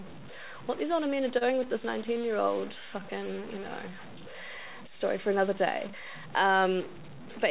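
From start to end the speech carries a distortion, and the pauses fill with a steady hiss rather than falling silent. This is most likely a stuck bit in the converter or data line. On a waveform, quiet stretches show small constant-height steps instead of flat baseline. On a spectrogram, gaps show a broadband noise floor and harmonics sit in a grainy wash.

At 1.38 to 1.43 s, right after "these older men are" and before "with this", there is a short stall from a late packet. The receiver held the last sound for about 29 ms while waiting, then resumed where it left off. Nothing is lost, but a sound drags with a faint buzz or dip. A spectrogram shows a short frozen band, and the waveform shows a repeated cycle.

From 2.19 to 3.01 s, after "with this" and before "you know", a jitter buffer slow-down repeats single pitch periods to rebuild its reserve. It adds about 54 ms, so the stretch plays at roughly 94% speed with unchanged pitch, sounding drawn out. 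Both delays happen on a call path whose content stops at 4 kHz, which fits G.711 mu-law. A spectrogram shows that ceiling, along with formants that are slightly lengthened.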